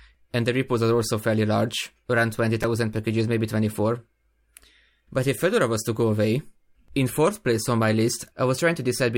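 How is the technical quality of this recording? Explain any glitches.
There's one glitch in this speech clip, at 2.63 s, just after "fairly large around". It's a repeated buffer: fresh audio didn't reach the output in time, so the device replayed the chunk it already had, twice more. The repeated piece is tiny, which points to a buffer of about 5 ms, so rather than a stutter you get a quick click or brief buzz with hard joins. Roughly 10 ms of real audio gets skipped in the process.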